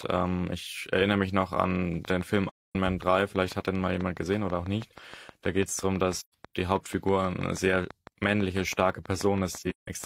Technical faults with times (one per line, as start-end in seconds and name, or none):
2.05-10.05 train of clicks
2.50-2.76 AAC frame loss with muting
6.18-6.34 AAC frame loss with muting
9.58-9.88 AAC frame loss with muting